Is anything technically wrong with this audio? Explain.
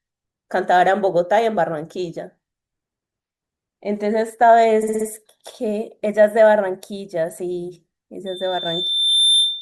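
Yes, two faults are audible.

Repeated frames, 4.82 to 5.06 s: a 60 ms block of compressed audio was delivered again, playing four extra times and adding 240 ms. The decoder replays identical material, so the speech stutters.

Loudspeaker feedback squeal, 8.26 s to the end at 9.62 s: the microphone picks up its own loudspeaker, and at 3.6 kHz the loop gain exceeds unity. That pure tone swells over about a second into a piercing squeal sitting a few dB above the speech.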